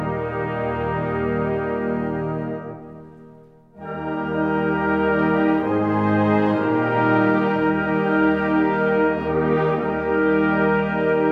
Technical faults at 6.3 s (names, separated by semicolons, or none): none